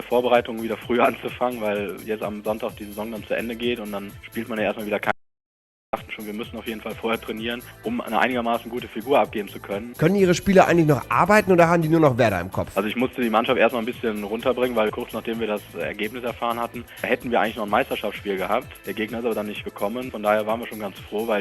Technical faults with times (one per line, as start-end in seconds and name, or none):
5.12-5.93 audio dropout to silence